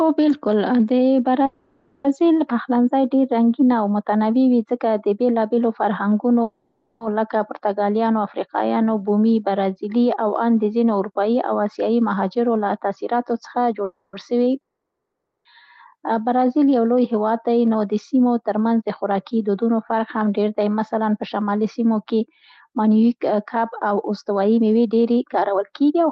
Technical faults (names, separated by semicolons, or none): call audio freeze; jitter buffer speed-up; long network dropout